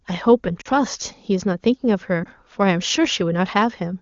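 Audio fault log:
0.61–0.68 s and 2.24–2.28 s, lost AMR speech frames: about 40 ms, then 20 ms, where the wideband decoder repeats the last good pitch and vocal-tract shape at falling gain. The two-frame run at 0.61 s fades to near silence, and the single lost frame at 2.24 s gives a brief warble or dip, not the hard silent gap or click of plain packet loss.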